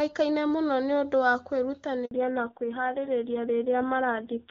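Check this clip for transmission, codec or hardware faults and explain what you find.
Two linked transmission faults occur mid-call: a handover gap followed by a fallback to narrowband.

From 2.05 to 2.11 s the audio drops into silence for 60 ms. No speech frames arrived while the call switched networks. The sound dies off within a few tens of milliseconds, and nothing fills the hole. Ordinary packet loss usually gets concealed with smeared or repeated sound, but this gap is clean, and the audio that resumes has changed character.

From 2.11 s to the end, everything above 4 kHz is gone. Before the switch, the AMR-WB wideband path carries the upper band. After it, the call runs on a narrowband codec, and the rasp points to a very low rate, likely AMR-NB at around 5.9 kbit/s. The result is duller and rougher. A plain low-pass filter would remove the highs without adding grit, and it wouldn't start right at a gap.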